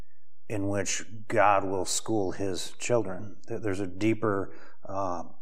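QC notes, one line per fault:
Throughout: DC offset. The whole speech waveform sits shifted off zero by a constant of about -31 dBFS. You won't hear it as such, but it eats into headroom on one side and shows up as steady energy right at the bottom of the spectrum.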